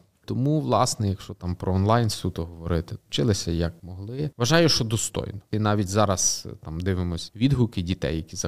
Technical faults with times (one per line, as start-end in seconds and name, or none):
none